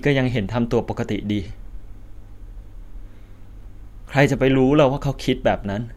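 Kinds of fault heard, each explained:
No faults can be heard anywhere in this recording: the signal holds steady in level and continuity, with no dropouts, distortion, added noise or timing irregularities at any point.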